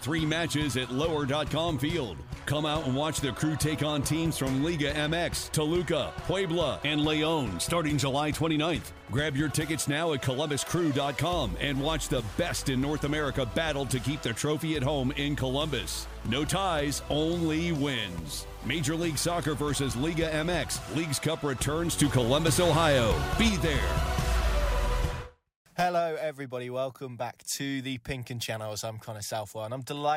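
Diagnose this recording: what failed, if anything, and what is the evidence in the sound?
A sudden gain jump lifts the level by about 5 dB from 22.00 to 23.49 s, sound and background noise rising together. This is likely a digital gain change applied without a ramp in processing. The waveform envelope steps abruptly, and the spectrogram brightens uniformly across all frequencies.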